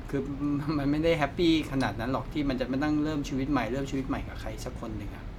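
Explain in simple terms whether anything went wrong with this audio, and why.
Nothing went wrong; no faults can be heard here.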